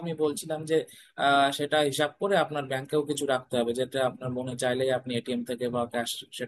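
Speech recording, with no audible technical faults anywhere.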